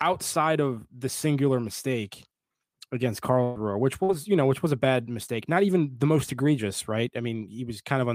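A burst of packet loss hits this speech clip twice. Consecutive packets failed to arrive in time, so the receiver extended the last sound it had and faded it out. From 3.43 to 3.58 s, about 120 ms of speech is replaced by that held, decaying fill. From 4.03 to 4.12 s, roughly 60 ms is lost just before "you know which was", and the speech resumes further on with that stretch missing.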